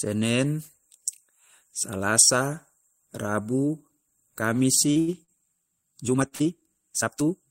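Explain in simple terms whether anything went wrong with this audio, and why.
Short concealed packet loss at 4.91 to 4.99 s and again at 5.23 to 5.31 s: each time about 40 ms of the call arrived too late to use. The receiver papered over the hole by carrying the last sound forward, so you hear a brief smear or wobble and a tiny piece is lost.

Short stall from a late packet at 5.00 to 5.10 s: the next piece of audio arrived 80 ms late and the waiting buffer ran dry. The receiver held the last sound for those 80 ms, then carried on from the same spot, so nothing is lost but one sound drags.

Time-stretched section from 6.00 s to the end: the pace suddenly doubles while the pitch stays put, and the audio turns rushed. That likely comes from software squeezing this part to half its length by dropping short slices.

Repeated stalls (stutter) at 6.28 to 6.65 s: packets kept arriving late, so the buffer emptied four times, the longest wait 42 ms. 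Each time the last sound was stretched to fill it, about a quarter of that stretch, so the audio stumbles without losing anything.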